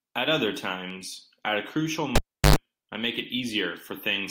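At 2.16 s a live cable is pulled and plugged in again. Breaking contact gives a pop, then 355 ms of near silence. While only the tip touches, 97 ms of 50 Hz mains buzz follows, and a second pop brings the speech back at 2.56 s.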